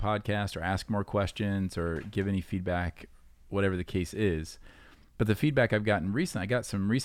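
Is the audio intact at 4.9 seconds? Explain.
Yes, the speech at 4.9 s is intact, with no audible fault at that moment.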